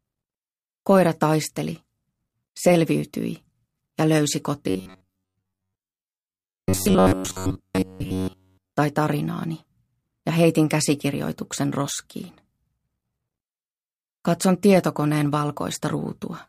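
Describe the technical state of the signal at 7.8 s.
Audio likely arrived too seldom between 4.70 and 8.72 s, so the last ~10.7 ms kept repeating. This is robotic sound from repeated short buffers: a rigid, metallic 93.8 Hz buzz.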